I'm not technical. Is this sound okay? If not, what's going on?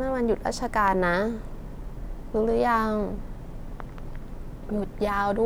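No. There's a loud pop at 0.88–0.90 s and a quick double pop at 3.80–4.00 s, likely an electrical jolt from a plug, switch or static.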